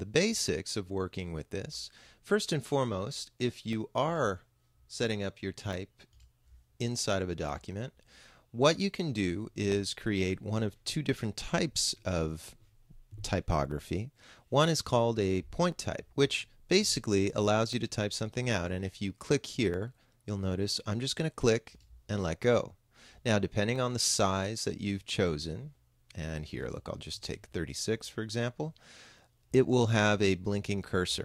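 From 1.73 s to 29.73 s, periodic USB or driver dropouts recur every 2.0 s: around fifteen gaps, each about a millisecond of audio replaced by silence as the driver stalls. They sound like regular ticks, and the waveform shows brief flat notches, with thin vertical broadband lines on a spectrogram.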